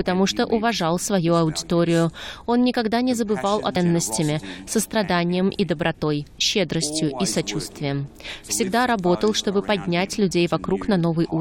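At 3.75 s the sound jumps abruptly ahead with a brief blip, likely a stream segment skipped when one chunk failed to load and playback continued.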